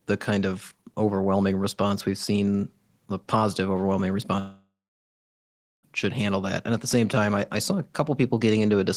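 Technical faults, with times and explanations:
4.39–5.85 s, long network dropout: incoming audio likely stopped arriving for about 1.44 s. The receiver stretched the last sound after "seen the positive overwhelming" into a fading buzz, then left about 1.09 s of silence before "should handle that" resumes, with the missing stretch lost.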